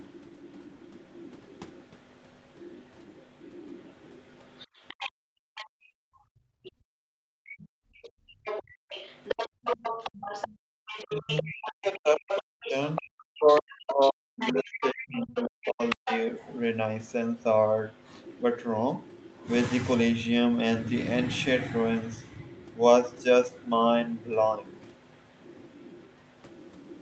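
From 0 to 5.69 s a faint second voice sits about 25 dB under the talker, likely the other side's voice leaking through from the loudspeaker past the echo canceller. Between 5.12 and 10.76 s the room sound dips and drops out for about three seconds in total, by up to about 36 dB: background gated by the echo canceller, which clamped the microphone while the loudspeaker played. From 6.64 to 19.48 s the leaking voice returns much louder, only about 10 dB below the talker. Within that stretch, from 11.04 to 16.27 s, the talker's own speech sinks and breaks up for roughly four seconds, dropping by around 40 dB, likely speech suppressed in double talk as the canceller turned both voices down. From 22.17 s to the end, the faint leak returns at about 25 dB down.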